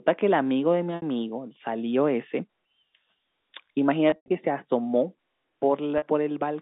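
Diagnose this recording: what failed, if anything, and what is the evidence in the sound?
The network stage dropped packets, and the receiver concealed each gap by looping the last pitch period of decoded speech, an instance of packet loss with pitch repetition. At 0.96–1.02 s (60 ms) and 5.98–6.02 s (40 ms) this is a briefly held, buzzy tone. From 4.10 to 4.29 s, 140 ms was lost across 200 ms, including a 100 ms run, where the repetition fades to silence over about 50 ms before speech cross-fades back.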